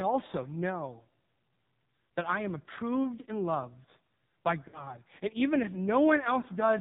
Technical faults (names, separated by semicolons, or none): AMR narrowband mobile codec; lost AMR speech frames